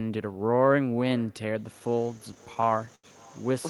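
Speech, where the far end is evidently playing the call over a loudspeaker with no echo canceller, so its microphone returns the talker's own voice after the network round trip. Throughout, each phrase is trailed by a faint, thin copy about 28 dB down, arriving roughly 0.4 s late. From 1.79 s to 3.06 s there are repeated stalls (stutter): packets arrived late or too slowly, emptying the jitter buffer again and again. Fifteen short holds stretch the last sound, the longest 85 ms, about 221 ms in all, close to a fifth of that stretch. Nothing is lost, but the speech drags and stutters there.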